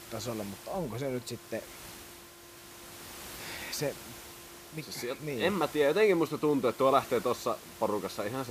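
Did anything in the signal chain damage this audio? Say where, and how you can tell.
No, nothing in the chain has damaged this speech, and the only thing sitting behind it is the room's own background noise, about 17 dB below the talking, which belongs to the recording space rather than to any stage of the system.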